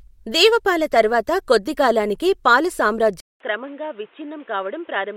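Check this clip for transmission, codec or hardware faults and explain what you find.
One fault is present, from 3.20 s to the end, after "దేవపాల తర్వాత కొద్దికాలానికే పాల": an input switched to a poorer device is the likely cause. A 200 ms silence precedes duller speech with nothing above 3.8 kHz, about 10 dB quieter, and a new noise floor roughly 30 dB down. The changed level and noise, not bandwidth alone, separate it from a codec narrowing.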